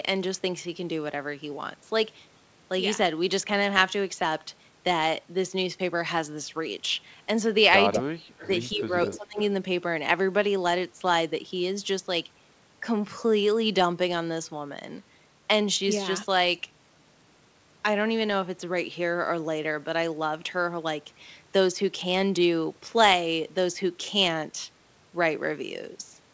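At 7.92 to 8.01 s a delayed copy of the speech breaks through at about the same level as the talker, then fades in again more weakly at 8.38 to 8.48 s (about 20 dB down), 9.11 to 9.16 s (about 15 dB down) and 9.39 to 9.43 s (about 20 dB down). Each scrap trails the original by 198 ms. This is an echo leak, likely from a far end on loudspeaker whose echo canceller let part of its microphone pickup return down the line.

Interleaved with those scraps, the talker's own speech collapses. From 8.0 to 8.34 s it drops by roughly 40 dB, almost to silence. From 8.75 to 9.38 s it dips again, this time by roughly 20 dB, over a few hundred milliseconds in total. This is speech suppressed in double talk. With both sides active, the canceller likely could not tell the talker from its loudspeaker echo and attenuated everything at once.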